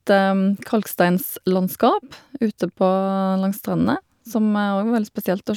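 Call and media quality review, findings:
Call and media quality review findings: none to report for this speech.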